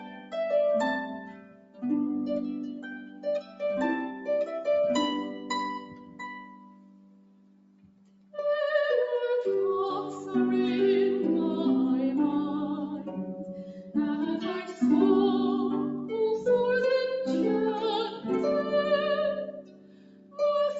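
A noise suppressor applied to music or sounds runs through the whole clip. A suppressor designed for speech treats sustained tones, ambience and reverberant tails as noise and pulls them down, while transients pass. The gain here swings by around 10 dB, so the sound pumps and thins as held material sinks beneath the attacks. The top of the spectrum stops near 8 kHz, consistent with the call path's bandwidth.

The sound cut by the noise suppressor shows up as distinct dips at 0.00–0.34 s (about 10 dB), 1.06–1.83 s (about 11 dB), 2.73–3.62 s (about 10 dB), 4.11–4.28 s (about 6 dB), 5.29–5.50 s (about 7 dB), 5.79–8.34 s (about 11 dB), 13.62–13.95 s (about 7 dB) and 19.49–20.39 s (about 11 dB). In each window, sustained or decaying sound drops in level or has its tail clipped short.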